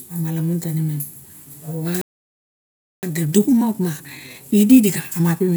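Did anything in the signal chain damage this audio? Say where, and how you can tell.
Yes, and it happens at the playback stage. At 2.01 s the speech just stops dead and the output sits silent for about 1.01 s, picking up again at 3.03 s. That's a playback stall. The gap is clean silence with no noise or garble in it, and the flow resumes rather than glitching. That points to a starved buffer or a blocked player thread, likely the player simply running dry until data arrived.

From 3.03 s to the end, the speech runs hurried at about 1.15 times normal speed, yet the pitch stays where it should be. That's time-compressed catch-up. The player is trimming the backlog built up during the stall by cutting out tiny slices and cross-fading the joins.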